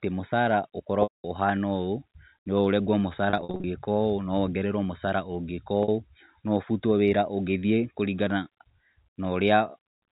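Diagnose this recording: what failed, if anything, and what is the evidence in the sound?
Network stage: packet loss with pitch repetition. The receiver loops the last pitch period, so 5.83–5.88 s and the scattered gaps of up to 50 ms across 3.30–3.64 s sound like held buzzes. The 210 ms gap at 1.03–1.24 s fades to silence. A plain dropout would cut straight to silence instead.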